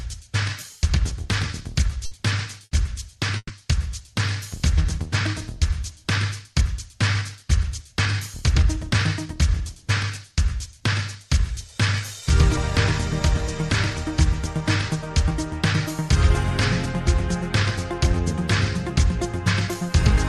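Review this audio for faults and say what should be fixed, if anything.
Runs of consecutive packets were lost or arrived too late, a burst of packet loss, at 2.05 to 2.14 s, 2.65 to 2.74 s and 3.37 to 3.52 s. The receiver filled each hole by extending the last sound and letting it fade, 60 ms in the first two and 120 ms in the third, where the fill runs out into about 40 ms of silence. Each time the audio jumps ahead, skipping the missing stretch. Adding forward error correction and a deeper jitter buffer on the link would stop these bursts from reaching playback.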